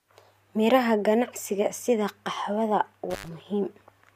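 Intermittent contact occurs from 3.10 to 3.29 s, just after "ganacsiga sida qaxwada". A loose plug or cable connection in the signal path momentarily loses contact, so the speech drops out abruptly. The line stays open for about 91 ms within that span, and faint hiss is left while it is open. The edges of the gap carry sharp crackle as the contact breaks and re-makes.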